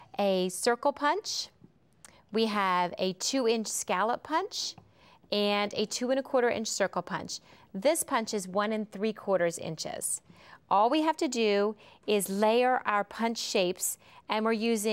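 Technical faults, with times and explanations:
Nothing stood out as a technical problem on listening.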